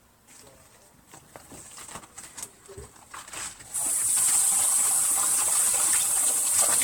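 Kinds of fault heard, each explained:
generation loss: The audio was likely decoded and re-encoded as MP3 around fifteen times, each pass requantising on a shifted frame grid so that errors pile up. It sounds swirly, hollow and smeared beyond a single 128 kbit/s encode, attacks blur, and nothing remains above 19.4 kHz.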